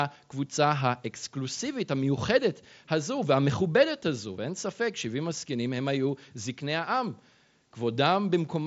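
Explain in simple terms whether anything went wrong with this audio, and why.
Nothing went wrong here: the speech comes over a Bluetooth headset link using the mSBC codec, and that's simply why there's nothing above about 7.7 kHz, which is just how that kind of connection works rather than a problem.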